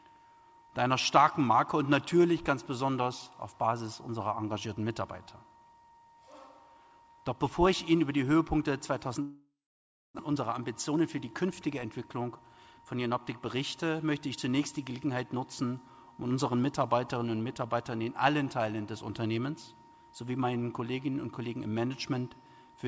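At 9.22 s the sound breaks into a fading buzz or hiss that decays to silence for about 0.61 s before resuming at 10.21 s with a stretch of about 0.6 s simply gone. This is most likely a long network dropout: packets stopped arriving, the receiver filled the gap by extending the last sound until that concealment ran out, and playback picked up later without the lost portion. The held-up audio left the receiver roughly 300 ms further behind. Right after, from 10.28 s to 13.21 s, the audio runs hurried, about 11% fast but at unchanged pitch. That is a jitter buffer speed-up: with more audio queued than it targets, the receiver snipped out short pitch-period-sized pieces again and again, removing around 0.3 s in total to pull the delay back down. Throughout, the audio passed through a call path whose band stops at 8 kHz, which points to a wideband codec such as G.722.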